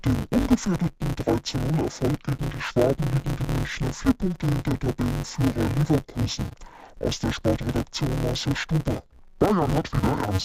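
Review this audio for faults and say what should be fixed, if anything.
Interleaved audio read as planar runs throughout the speech. Each 5.33 ms block, which fits a 256-sample buffer, has its alternating samples split into halves, leaving the sound dull and robotic with a 188 Hz buzz. A spectrogram shows horizontal lines at multiples of 188 Hz, and the waveform shows a break every 5.33 ms. To prevent it, check that the buffer's channel layout flag matches the decoder's output before reading.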